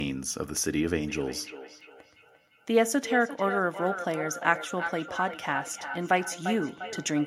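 From 1.06 s through to the end of the speech, a feedback echo between two devices is present. A second device in the same room plays back what the first microphone sent, and that microphone picks it up again. The local echo canceller only removes its own device's playback, so it cannot suppress this loop. The speech returns at a fixed interval of roughly 0.4 s, with the loudest repeat sitting about 8 dB below the direct speech.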